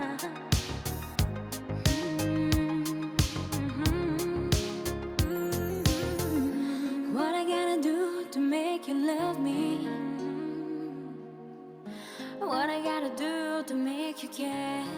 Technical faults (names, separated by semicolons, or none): none